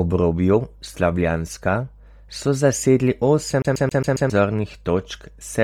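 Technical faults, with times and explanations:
Throughout: Bluetooth LC3 compression. The speech carries a breathy, grainy edge across the whole clip, with the upper spectrum sounding thin and hissy rather than detailed. This points to a low-bitrate transform codec working in 10 ms frames, likely LC3 at around 32 kbps, where much of the high-frequency content is discarded and replaced with synthetic noise. The damage is heavy, so the fill noise is easy to hear, while the band itself extends to about 20.2 kHz.
3.62 to 4.30 s: CD stuck on one turn. A short slice of about 136 ms plays five times in a row, giving the fast, regular stutter of a skipping disc, with a brief mute at each jump back. The cause is a disc defect that sends the laser back one track at the same point on each rotation, so the same fragment repeats until the player breaks free and normal playback resumes.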